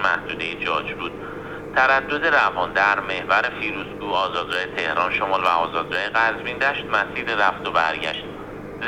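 Nothing stood out on listening to this recording.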